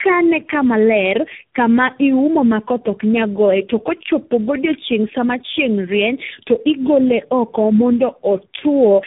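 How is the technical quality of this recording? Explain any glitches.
The quality is poor throughout: the speech sounds rough, muffled and warbly, with nothing above 3.8 kHz. This is tandem speech coding, likely from about three speech codecs in a row, each re-coding the previous one's degraded output.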